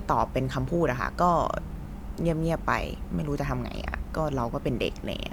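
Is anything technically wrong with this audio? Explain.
No, nothing technically wrong can be heard in this speech recording. There is no moment in it where a technical problem stands out.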